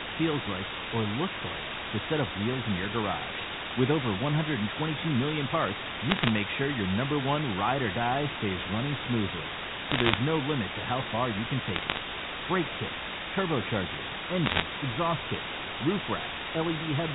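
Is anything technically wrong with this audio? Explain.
Yes. There are two faults.

Low bit depth with dither runs through the whole clip. The speech has been reduced to what points to about 3 bits, with dither added before rounding, so the rounding error becomes steady white noise rather than distortion. That hiss sits at roughly the same level as the speech. On a spectrogram it appears as an even wash across the band up to the 4 kHz telephone limit, with the speech barely standing out. The waveform shows a thick noise floor.

Bit errors on a digital phone line come in four short bursts:
from 6.10 to 6.29 s, just after "million parts";
from 9.89 to 10.18 s, between "die stays running smoothly" and "no limit to how";
from 11.68 to 11.97 s;
from 14.46 to 14.62 s, between "kits turbochargers" and "exhaust kits roof".

Flipped bits on the A-law line each corrupt a single sample. A hit on a high-order bit or on the sign bit of a loud sample makes a sharp tick, so each burst sounds like crackle over the speech. 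The waveform shows isolated spikes. The spectrogram shows thin vertical lines spanning the band.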